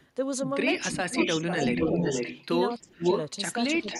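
A speech recording with two related faults. The first is echo leak. A delayed copy of the talker's voice comes back. A very faint trace at 0.0 to 0.07 s trails by 324 ms. Louder echoes follow at a 474 ms lag. From 0.9 to 2.47 s the echo is about as loud as the speech. From 2.7 to 3.22 s it is slightly louder. From 3.87 s to the end it is quieter. The likely cause is a far-end loudspeaker whose echo canceller let its microphone pick-up through. The second fault is speech suppressed in double talk. The voice on the loudspeaker side dips while both sides talk at once. The drops occur at 0.91 to 1.5 s (around 10 dB), 1.73 to 2.21 s (around 5 dB), 2.81 to 3.08 s (around 25 dB) and 3.77 s to the end (around 10 dB). This likely comes from the same canceller. It cannot separate live speech from echo, so it turns both down.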